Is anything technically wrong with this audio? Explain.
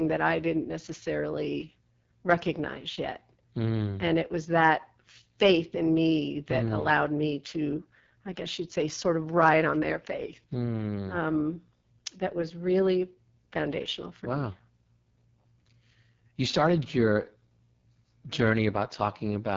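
Yes. Throughout, the speech carries heavy AMR wideband (HD Voice) codec damage: nothing above about 7.3 kHz, with a rough, raspy texture that fits the lowest 6.6 kbit/s mode, where the pulse-excited vocal tract model is starved of bits and the top band is synthetic noise.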